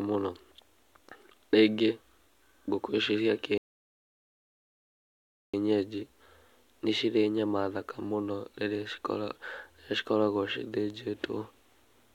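At 3.58 s, right after "ngũkũ icio cia", a rebuffering stall cuts the speech to silence until 5.54 s: the player exhausted its downloaded audio and waited for more. On a waveform it is a flat gap, a blank spectrogram column, before speech resumes exactly where it stopped, adding about 1.96 s.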